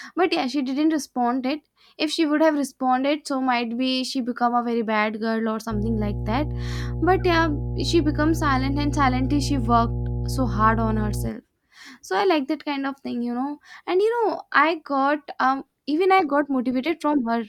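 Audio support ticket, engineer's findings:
Mains hum, 5.69 s to 11.31 s. Steady low tone at 60 Hz with low harmonics, loud relative to the speech, roughly 5 dB below it. Probable ground loop or nearby transformer coupling the power line into the signal path.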